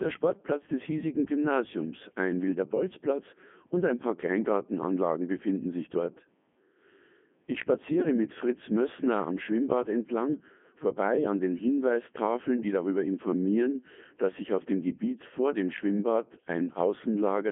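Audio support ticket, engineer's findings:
Codec 2 vocoder, whole clip. Speech robotic and buzzy, heavily degraded; nothing above 3.5 kHz, band roughly 150 Hz to 3.4 kHz. Decoder rebuilds voice from sine waves using pitch, voicing, energy and envelope only, so the waveform is lost. Character fits the 3.2 kbit/s mode.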